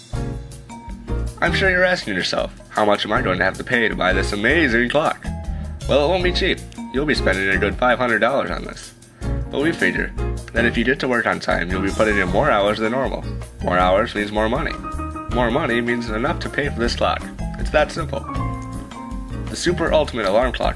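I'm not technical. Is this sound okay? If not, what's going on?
Yes, nothing in this recording points to a technical fault.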